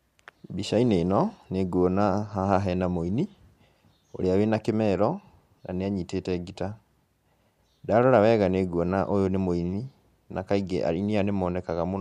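Nothing in the signal of this speech recording points to a technical fault at any moment.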